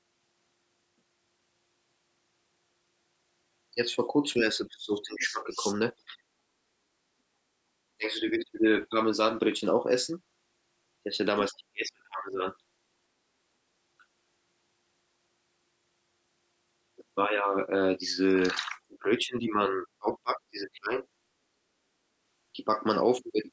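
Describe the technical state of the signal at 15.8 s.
At 15.8 s the speech signal is intact, carried cleanly through the call microphone processing with its normal band limit near 8 kHz and no fault present.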